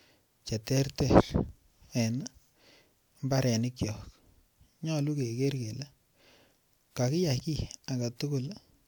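A speech recording, and nothing is technically wrong with it.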